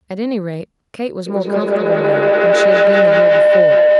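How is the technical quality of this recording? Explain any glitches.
The recording is marred by one serious fault. Feedback howl sets in at 1.26 s and runs to the end: a microphone-to-loudspeaker loop gains level each pass, repeating roughly every 200 ms, narrowing to a tone around 700 Hz that peaks about 9 dB above the speech.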